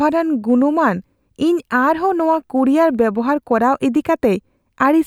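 No technical faults can be heard anywhere in the recording; the signal stays continuous and intact throughout.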